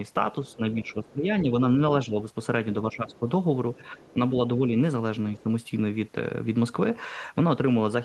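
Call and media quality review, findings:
Other side's voice leaking through: faint second voice about 30 dB under the talker at 0.48–1.12 s, 3.86–4.13 s and 5.36–5.43 s, and about 35 dB under at 3.12–3.19 s. Likely residual echo from the echo canceller passing loudspeaker pickup. It is a separate voice, not a delayed copy of the talker, so it isn't reverberation or codec pre-echo.

Speech suppressed in double talk: talker level dips during overlap with the far end at 0.56–2.17 s (about 15 dB at deepest, roughly 0.7 s affected in total), 2.82–4.74 s (about 10 dB, roughly 1 s) and 5.35–5.49 s (about 10 dB). The echo canceller is likely attenuating near-end speech along with echo. The dips line up with far-end activity, which rules out packet-loss dropouts or an automatic gain control pumping.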